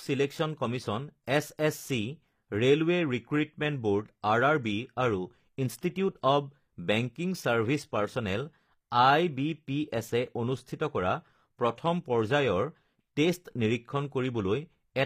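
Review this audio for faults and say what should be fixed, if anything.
Throughout, s sounds are bright but gritty and lispy, likely HE-AAC compression near 24 kbps: the treble is copied up from lower bands, not muffled away. Encode at a higher bitrate, or without band replication, so the treble is coded directly.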